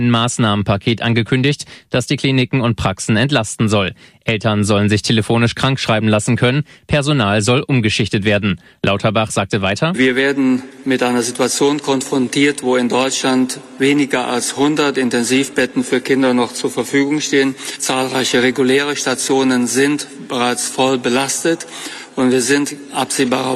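Nothing stood out as a technical fault on listening to this clip.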